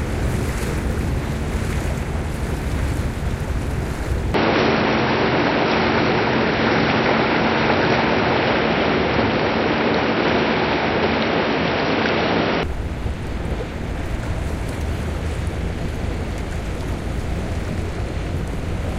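A recording of everyday sounds that turns dull and boxy from 4.34 to 12.63 s, likely an input switched to a poorer device. A spectrogram shows nothing above 5.7 kHz there and a faint new noise floor around 40 dB down, while the waveform steps about 5 dB in level with no gap at either switch.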